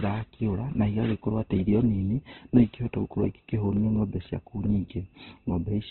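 Throughout the speech there's heavy Opus compression, likely from a very low bitrate around 12 kbps. Nothing comes through above about 4.1 kHz, so it's muffled and narrowband, and with so few bits the codec fills bands coarsely, leaving the voice rough, grainy and a bit noisy rather than swirly.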